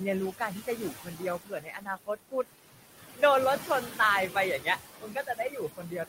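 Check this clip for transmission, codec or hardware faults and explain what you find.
The clip is speech with two related faults, both from a noise suppressor. There are no transmission or hardware faults.

Noise suppressor artifacts run throughout. The suppressor pulls down bands it judges to be steady noise by about 15 dB, frame by frame. The room noise, about 11 dB below the speech, dips between phrases and returns under them.

Speech cut by the noise suppressor occurs at 0.67–1.22 s, 1.38–2.45 s and from 5.0 s to the end. Quiet speech was classed as noise and attenuated, by up to about 14, 17 and 16 dB respectively. Roughly a fifth of a second and half a second of speech are affected in the first two spans, and these parts sound swallowed and faint.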